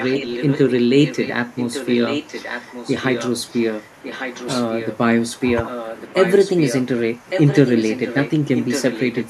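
Echo leak runs from 0.0 to 4.97 s, 5.65 to 6.84 s and 7.3 to 9.25 s. A copy of the speech returns about 1.15 s late and roughly 10 dB quieter, likely a loudspeaker far end whose echo canceller let its microphone pickup through.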